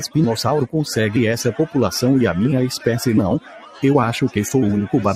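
A noise suppressor built for speech was applied to this sound throughout. It treats sustained parts and tails as noise, so levels pump by roughly 10 dB. From 3.4 to 3.83 s, the sound is cut by the noise suppressor. It drops by about 11 dB, sinking and thinning for around 0.4 s.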